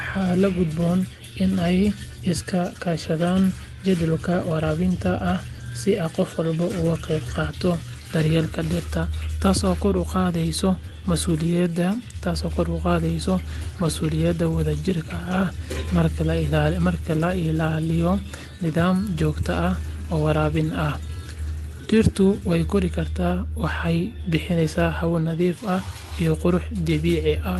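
The speech carries no technical faults, with the audio having passed through a call codec and jitter buffer whose high-frequency content stops at about 12 kHz, which fits Opus running at a moderate bitrate.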